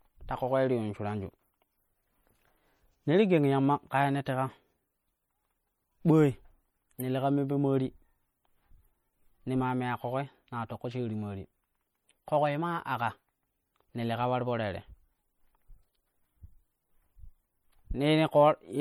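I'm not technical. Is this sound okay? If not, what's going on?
No, not quite. All the way through, the speech has a watery, swirly quality, with s sounds turning metallic and chirpy. That's likely MP3 compression squeezed too hard: the file saves space by dropping quiet detail, which flickers in and out.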